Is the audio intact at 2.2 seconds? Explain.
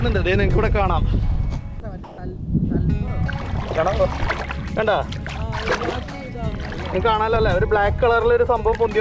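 Yes, but only just. From 2.04 to 2.18 s there is comfort noise in place of the background. For 140 ms the real background gives way to a steady, featureless noise, about 1 dB quieter. The likely cause is discontinuous transmission muting the pause while the receiver filled it with synthetic noise.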